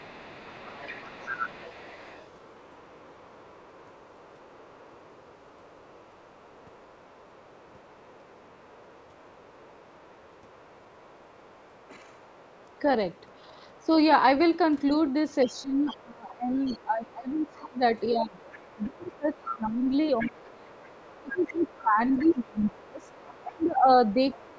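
Speech with the other side's voice leaking through as a faint second talker, roughly 25 dB down (closer to 30 dB at 17.37–18.0 s), across 0.0–13.86, 14.42–15.84, 16.65–16.74 and 18.53–24.41 s, likely loudspeaker echo the canceller missed. Speech suppressed in double talk shows as a slight dip at 11.91–11.99 s, then deep cuts of around 25 dB from 15.45 s to the end, likely while both sides overlap.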